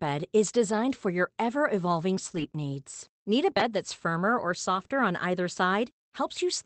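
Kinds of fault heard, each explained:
Lost packet rebuilt from error correction: at 2.31 to 2.41 s after "for your ever evolving" and 4.75 to 4.85 s after "that's firmer or", about 60 ms went missing each time. Low-bitrate backup copies from later packets filled it, so there's no gap, only briefly rougher, noisier sound.
Processor overload crackle: from 2.99 to 3.76 s, just before "that's firmer or", the processor fell behind and missed roughly ten buffer deadlines, fitting buffers of around 5 ms. Each missed buffer was skipped, and the tiny hard-edged gaps pile into gritty crackle until the load eases.
Short concealed packet loss: at 4.87 to 4.91 s, just after the second rebuilt stretch, 20 ms of audio never arrived in time. The decoder bridged it by extending the preceding sound and then blending back into the real signal, leaving a brief smear or wobble.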